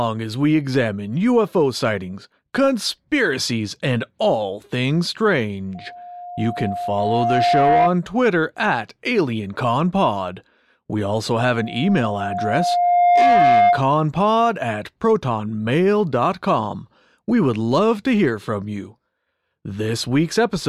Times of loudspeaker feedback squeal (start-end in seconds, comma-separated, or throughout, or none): 5.75-7.96, 11.40-13.89